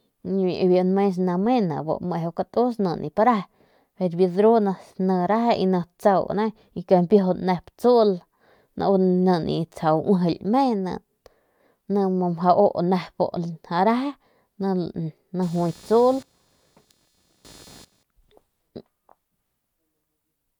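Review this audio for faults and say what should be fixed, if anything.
From 15.42 to 18.03 s a computer activity noise runs under the speech: a chirping buzz pulsing at around 300 Hz, roughly 30 dB below the voice. Load changes in the machine shift the ground the audio circuit shares, and that movement rides into the signal. A spectrogram would show a stack of evenly spaced lines at 300 Hz intervals confined to that span and unrelated to the speech energy. To prevent it, use an isolated or external audio interface, or a ground-loop isolator.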